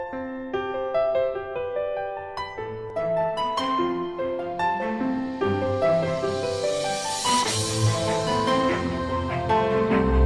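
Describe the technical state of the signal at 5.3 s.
At 5.3 s the signal is intact, with no audible fault.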